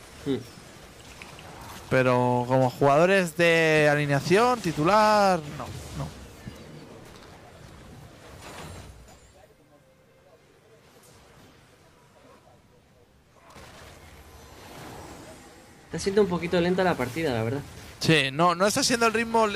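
No technical faults can be heard anywhere in this audio.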